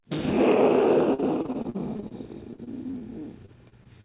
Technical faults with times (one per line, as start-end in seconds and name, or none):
1.14-2.13 repeated packet loss (robotic sound)
2.51-3.03 repeated packet loss (robotic sound)
3.46-4.04 repeated packet loss (robotic sound)